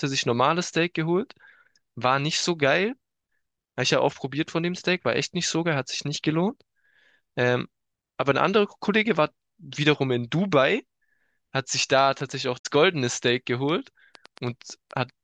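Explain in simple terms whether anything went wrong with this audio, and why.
Yes, two things went wrong. From 11.91 to 14.92 s there is a train of clicks: about ten sharp ticks, roughly three or four per second at an uneven pace, sitting on top of the speech. Something was injecting pulses into the signal, likely electrical interference or a faulty connection or power supply.

Inside that stretch, from 12.58 to 12.66 s, there is damaged data in a compressed stream. A short piece of the file was corrupted, so the decoder lost its place and had to find the next valid chunk, which produces a brief squawk or blip.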